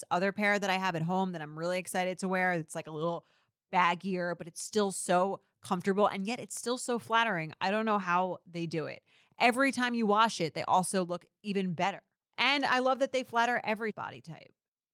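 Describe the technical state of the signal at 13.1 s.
At 13.1 s the speech signal is intact, with no audible technical fault at that moment.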